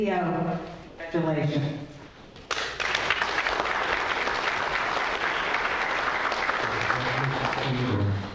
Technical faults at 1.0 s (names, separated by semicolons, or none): sound dropped by the voice detector